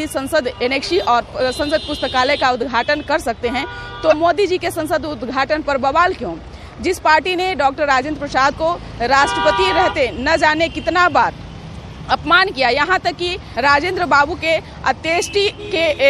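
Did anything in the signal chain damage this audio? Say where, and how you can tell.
Yes. Throughout, quiet detail swirls with a watery quality, with smeared attacks. This is likely MP3 compression at a low bitrate, around 64 kbps. A spectrogram shows speckled bands flickering between frames.

Three brief blips, at 4.09–4.14 s, 8.48–8.52 s and 13.52–13.56 s, point to damaged data in the compressed stream. The decoder misreads corrupted frames, loses sync and resumes at the next header. The waveform shows a short discontinuity, and the spectrogram shows a narrow broadband smear.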